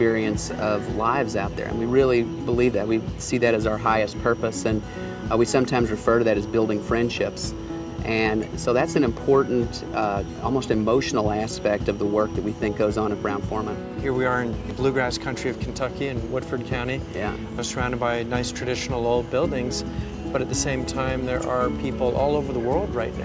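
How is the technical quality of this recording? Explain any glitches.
No glitches are audible; the audio carries the normal signature of a call's microphone processing, with the lowest bass removed by its high-pass filter and nothing above 8 kHz.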